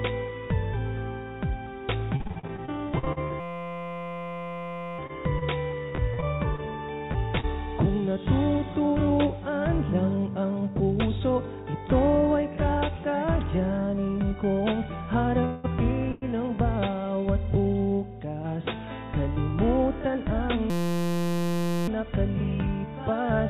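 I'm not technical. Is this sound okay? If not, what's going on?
No. From 2.16 to 7.45 s the sound turns choppy and robotic. This is repeated packet loss: small pieces kept going missing in transit, 22 times, none longer than 40 ms, and each hole was patched by stretching the last bit of sound.

Inside that stretch, from 3.40 to 4.99 s, and again from 20.70 to 21.88 s, a steady buzz takes over. That's a system hang loop: the computer briefly froze while the sound hardware kept replaying one tiny 5.8 ms slice, about 172 times a second, which fits a 256-sample buffer.

From 10.45 to 11.20 s the sound briefly rushes, about 8% faster, with no change in pitch. This is a jitter buffer speed-up: audio had piled up after a delay, so the receiver trimmed out small slivers, about 70 ms in total, to catch up.

At 15.45 s (for about 0.19 s) and 16.12 s (for about 0.10 s) the sound stalls into a short fading buzz or hiss, then carries on where it stopped. 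This is a call audio freeze, likely caused by packets arriving late, so a pause was inserted rather than sound lost.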